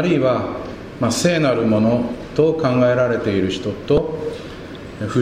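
At 3.95 to 3.98 s there's damaged data in the compressed stream: the decoder hits corrupted frames, loses sync, and spits out a brief chirp, squawk, click or short hole.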